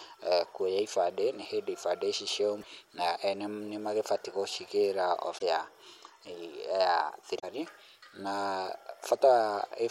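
At 2.58 s, after "nĩ hĩndĩ ibandĩ ici" and before "na ene nĩ magĩbatie", the speech breaks into a short glitch lasting about 0.08 s. This is damaged data in a compressed stream: the decoder hits corrupted frames, loses sync and skips ahead to the next valid header. Two more follow, at 5.34 s after "ene nĩ magĩbatie gũcigĩra" and at 7.36 s, each about 0.08 s. On a spectrogram each appears as a narrow vertical smear of broadband or garbled energy. In the waveform the signal shows an abrupt discontinuity.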